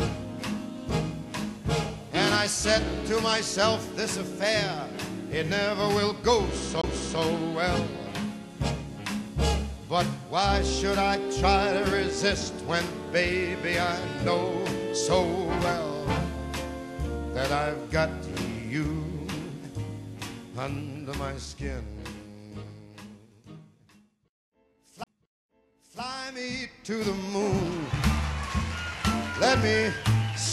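A CD skip occurs at 6.81 to 6.84 s and again at 25.04 to 25.07 s. In each, the laser lost its track on the disc's spiral and landed on a different turn. The player muted for a brief gap, roughly 20 ms the first time and around 30 ms the second, then resumed from the new position. Each skip is heard as a small tick followed by an abrupt jump in the sound, as though a piece were cut out or repeated.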